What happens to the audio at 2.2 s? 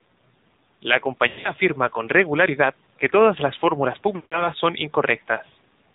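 At 2.2 s you're hearing the same thing that runs through the whole clip: AMR narrowband mobile codec damage, and it's plainly audible. The speech has been squeezed through an 8 kHz mobile coder that rebuilds the voice from a vocal-tract model fed by a few pulses per 5 ms slice, so nothing above 4 kHz survives. It sounds dull, buzzy and synthetic, which fits a low rate around 7.4 kbps.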